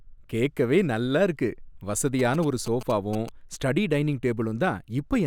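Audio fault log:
2.19–3.29 s GSM signalling bursts: a nearby 2G phone's rectified radio pulses give galloping ticks and 217 Hz buzz before "ஸ்டடி டைனிங்", seen as clustered vertical spectrogram stripes.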